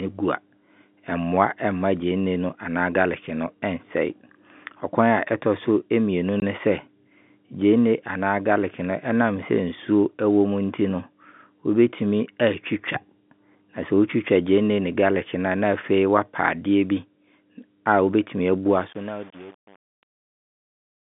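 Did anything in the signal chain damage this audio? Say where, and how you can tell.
Yes, at the network stage. One packet went missing and the receiver played silence in its place instead of concealing the loss. The result is a 20 ms hole in the speech from 6.40 to 6.42 s, with hard edges as the sound is cut off and then snaps back. A single dropout of exactly 20 ms fits one lost packet of 20 ms. The G.711 telephone band of 150 Hz to 3.6 kHz is part of the normal path.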